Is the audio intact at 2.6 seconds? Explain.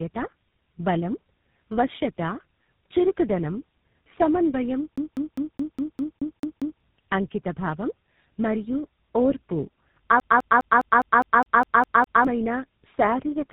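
No. Tandem speech coding runs through the whole clip: three speech codecs in a row re-encode each other's output, making it rougher and more warbly than one codec, with nothing above 3.8 kHz.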